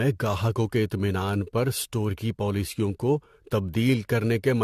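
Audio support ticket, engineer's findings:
Generation loss, whole clip. Speech sounds swirly and hollow, consonant attacks smeared, nothing above 14 kHz. Likely repeated lossy re-encoding, around five passes, consistent with AAC-LC at about 64 kbit/s. Each pass requantises on a shifted frame grid, so noise and spectral holes stack up, worse than one encode at that rate would give.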